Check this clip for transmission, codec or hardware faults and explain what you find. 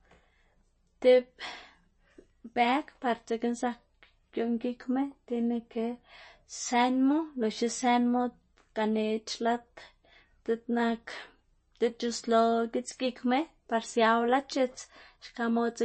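MP3 compression damage is plainly audible throughout the speech. Nothing reaches above 8.3 kHz, and weak detail flickers watery and swirly, which fits a low bitrate around 32 kbps and likely comes from MP3 coding. A spectrogram shows a flat ceiling at 8.3 kHz with patchy, blinking gaps beneath it.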